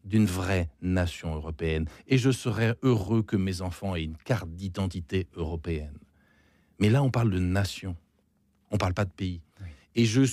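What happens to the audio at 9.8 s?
Nothing goes wrong at 9.8 s: the speech carries on intact there, with no dropout, click, distortion or other fault at that point.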